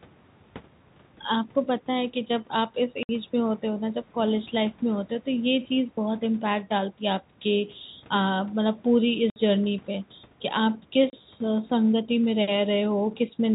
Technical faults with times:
3.03-3.09 packet loss filled with silence
9.30-9.36 packet loss filled with silence
11.10-11.13 packet loss filled with silence

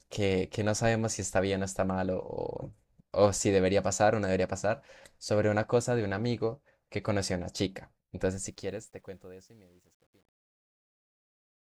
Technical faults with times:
8.22-11.64 truncation distortion on a fade

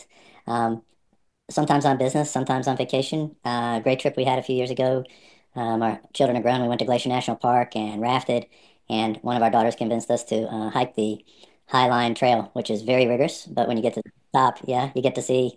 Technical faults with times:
0.00-15.56 wrong sample rate

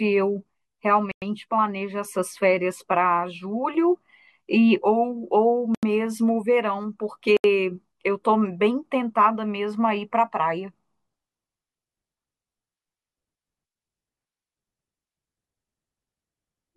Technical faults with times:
1.11-1.22 Bluetooth stall
5.75-5.83 Bluetooth stall
7.37-7.44 Bluetooth stall

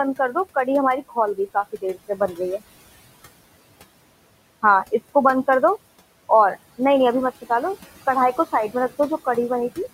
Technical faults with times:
0.00-9.93 noise suppressor artifacts
1.08-1.17 speech cut by the noise suppressor
1.54-2.39 speech cut by the noise suppressor

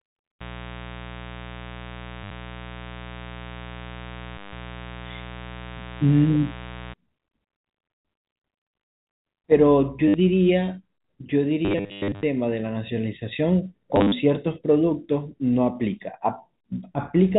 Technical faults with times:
0.41-6.93 mains buzz
2.24-2.31 packet loss with last packet repeated
4.38-4.53 packet loss with last packet repeated
10.08-10.14 packet loss with last packet repeated
11.65-12.23 packet loss with last packet repeated
13.96-14.12 packet loss with last packet repeated

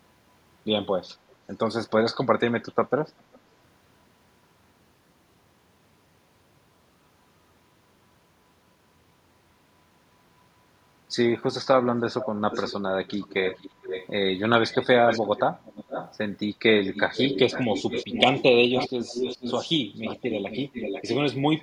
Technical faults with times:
1.29-1.35 echo leak
3.33-3.39 echo leak
12.20-12.76 echo leak
13.08-14.09 echo leak
14.72-16.16 echo leak
16.94-19.69 echo leak
20.04-21.16 echo leak

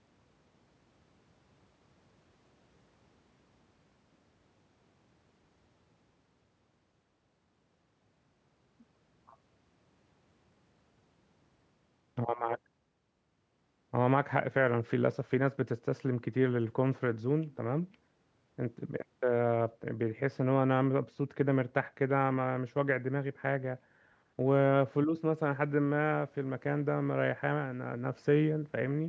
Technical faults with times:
none

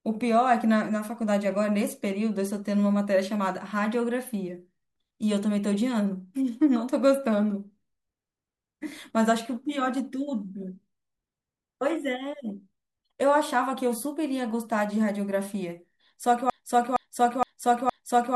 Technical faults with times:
16.50-18.35 broken-record loop

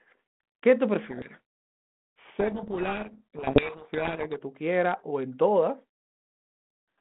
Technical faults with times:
1.06-4.38 codec payload misread

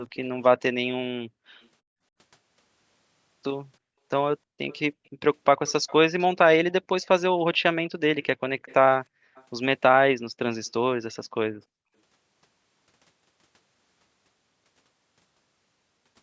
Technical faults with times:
4.70-4.77 echo leak
5.67-5.93 echo leak
8.59-8.74 echo leak
9.35-9.44 echo leak

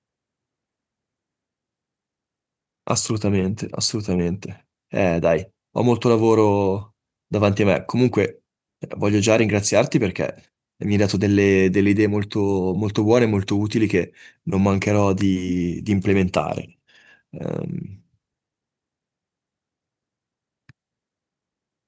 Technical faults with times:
none

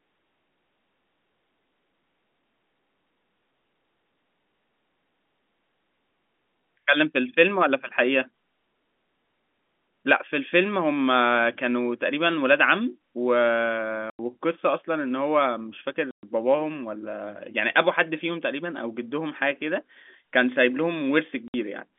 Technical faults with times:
14.10-14.19 packet loss filled with silence
16.11-16.23 packet loss filled with silence
21.48-21.54 packet loss filled with silence

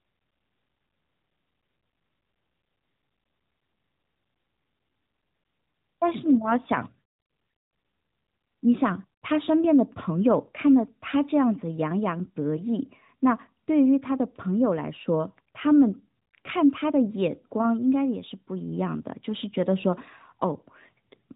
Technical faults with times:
none

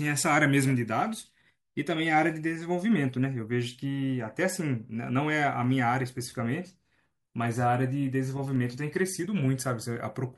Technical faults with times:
5.64 dropped samples
8.56 dropped samples
9.83 dropped samples

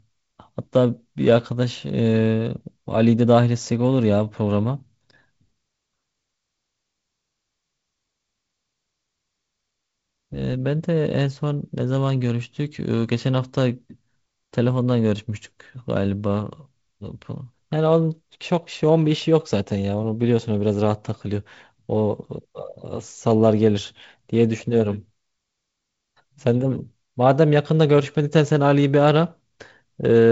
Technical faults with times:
none

